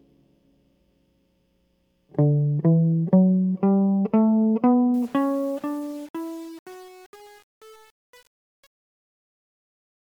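From 4.94 s to the end at 10.1 s, the music's fade-out, beginning around 5 s, shows truncation distortion on a fade. The gain stage keeps too few bits and adds no dither, consistent with roughly 7-bit resolution, so as the level falls the waveform collapses onto coarse steps. From 5.05 s onward the tail turns grainy and buzzy instead of tapering cleanly away.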